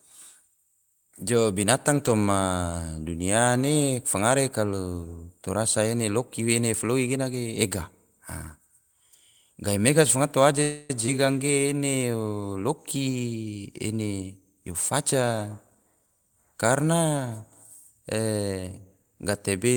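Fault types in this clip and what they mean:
Call audio freeze: Just after "gahimega si fangato", at 10.62 s, the speech stops moving forward for 0.28 s. The last sound is drawn out as a fading buzz and then picks up exactly where it left off, so nothing is lost and the delay grows by about that much. The likely cause is packets held up in transit until the jitter buffer ran dry. Unlike a skip, the sound resumes without any jump.
Skip ahead: At 11.07 s the speech jumps forward almost seamlessly, with only a tiny join of about 10 ms. Roughly a tenth of a second of speech is gone, and the two sides are spliced nearly directly. A stretch was dropped while later audio was already queued, which cut the delay back by about the same amount. This is the reverse of the freeze just before it: a piece goes missing instead of a gap being inserted.
Jitter buffer slow-down: From 11.56 s to 12.54 s the speech runs at about 89% speed while keeping its pitch. 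Single pitch periods and bits of pauses were repeated again and again, adding 120 ms so the running-low buffer could rebuild a reserve. The sounds are drawn out. Unlike the freeze, nothing stalls and there is no fading buzz. The whole passage is simply stretched.
Jitter buffer speed-up: Two passages sound hurried while keeping their pitch. From 13.98 s to 14.67 s the speech runs at 126% speed, with roughly 200 ms removed. From 15.15 s to 16.07 s it runs at 109%, with roughly 100 ms removed. Short pieces of one or a few pitch periods were cut out repeatedly to drain excess buffered audio. Unlike a skip, nothing vanishes in a single jump. The loss is spread thinly across each passage.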